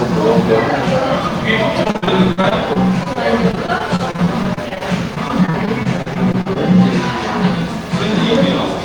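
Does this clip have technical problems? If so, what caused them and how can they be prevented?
Yes: repeated packet loss (robotic sound) from 1.83 to 6.57 s. Dozens of short dropouts, the longest 59 ms, are patched by repeating the last sound, which produces a choppy texture with pieces missing. On a spectrogram this shows as smeared, repeated vertical slices, and the waveform shows notches. A jitter buffer, forward error correction or a steadier network connection would prevent it.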